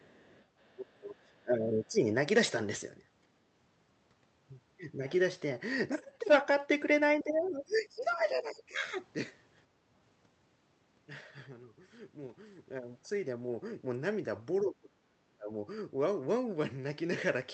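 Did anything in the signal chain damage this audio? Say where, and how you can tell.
Yes. The damage happens at the call-processing stage, in the echo canceller.

Other side's voice leaking through, 0.0 to 0.75 s: a faint second voice sits around 30 dB below the talker. The likely cause is loudspeaker playback reaching the microphone, with the echo canceller leaving a residue instead of removing it fully.

Speech suppressed in double talk, at 0.75 to 2.02 s, 7.18 to 8.78 s and 14.62 to 15.53 s: the talker's level sinks by roughly 15 to 35 dB, deepest in the last stretch. Likely the canceller heard both sides at once and turned everything down.

Background gated by the echo canceller, 9.72 to 9.82 s: the room sound dips by about 6 dB for about 70 ms, then returns. The canceller clamped the microphone while the loudspeaker played, and released it afterwards.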